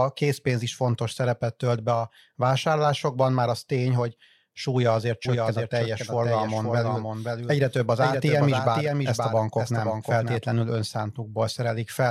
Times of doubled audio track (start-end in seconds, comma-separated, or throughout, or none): 5.25-10.37